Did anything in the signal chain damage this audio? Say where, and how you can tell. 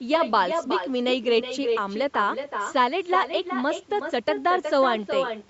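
Yes. The damage is in the call path: echo with no canceller. Throughout the speech, each phrase returns roughly 0.4 s later, about 6 dB quieter and thinner. The far end's loudspeaker fed its microphone, and nothing removed that before the return trip.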